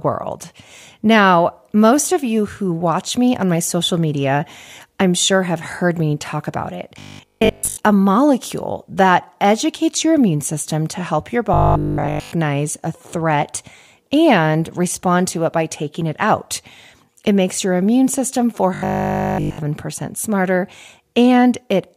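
From 6.99 to 7.77 s the speech takes on robotic sound from repeated short buffers, with most of the audio replaced; it returns fully at 11.54–12.32 s and 18.74–19.58 s. A rigid 50 Hz buzz fits a 20 ms fragment being looped while fresh audio likely arrived too late. Unlike a codec's warbly metallic smearing, the buzz here stays at a fixed 50 Hz rate.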